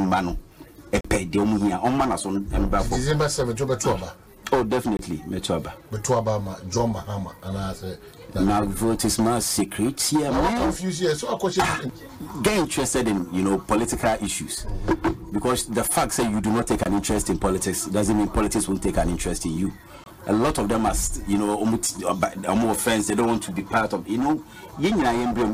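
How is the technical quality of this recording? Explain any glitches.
The recording has four dropouts, each a block of digital silence. They occur at 1.01 s (39 ms) and at 4.97, 16.83 and 20.04 s (23 ms each). The sound drops to zero and returns with no fade. Each gap is heard as a brief hole. The 23 ms gaps fit a 1024-sample output buffer that was not filled in time.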